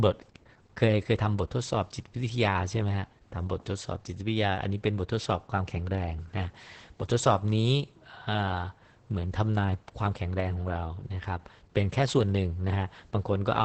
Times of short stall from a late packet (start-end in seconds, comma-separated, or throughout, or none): none